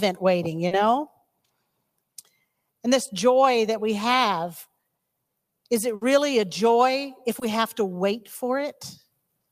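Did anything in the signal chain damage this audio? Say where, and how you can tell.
Yes, on the network path: short concealed packet loss at 0.67 s and 7.39 s left 40 and 20 ms gaps, bridged by continuing prior sound, which shows as brief smeared spectrogram patches.

A burst of packet loss at 5.95 s drops 60 ms. The held, fading fill shows as a decaying waveform stretch before audio resumes further on.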